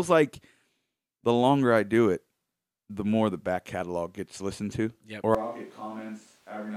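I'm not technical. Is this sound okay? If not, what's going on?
No. There's a switch to a distant microphone at 5.35 seconds, lasting to the end of the clip. At that moment the speech suddenly turns roomy and hollow, with less of its warm low end, and it drops to a noticeably quieter level while background room noise becomes easier to hear. The likely cause is that the close microphone near the speaker stopped being used, so the recording fell back on one placed much farther away.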